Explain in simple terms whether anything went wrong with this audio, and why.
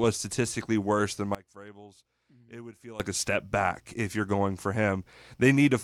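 Sudden gain jump from 1.35 to 3.0 s: right after "statistically worse than", the speech and background drop together to much quieter, then jump back before "a step back if", likely from a level setting applied instantly without any smooth fade.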